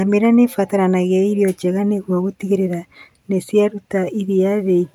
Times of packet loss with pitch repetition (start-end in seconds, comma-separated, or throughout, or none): none